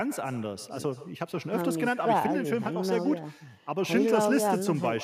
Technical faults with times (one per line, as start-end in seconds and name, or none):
0.00-5.03 echo with no canceller